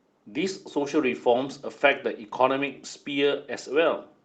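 Listening through this speech recording, which came over a call connection, nothing stood out as a technical fault at any point.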